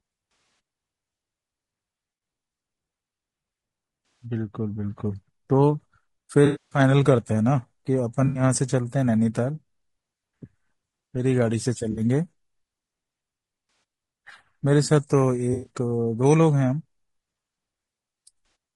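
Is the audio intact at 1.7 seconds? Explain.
No. At 1.7 seconds, as across the whole clip, the speech carries plainly audible damage from low-delay AAC compression, likely AAC-ELD at a low bitrate near 32 kbps. Its short frames resolve pitch harmonics poorly, so the voice sounds rough and grainy. On a spectrogram, the harmonic stripes look smeared, with noise filling the gaps between them and a thinned or synthetic-looking top band. The waveform shows no clear break.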